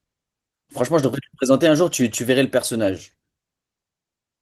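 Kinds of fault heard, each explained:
No faults can be heard in the speech. It has passed through Opus voice compression with the full band kept and only light coding damage, which fits a hybrid setup at around 20 kbps.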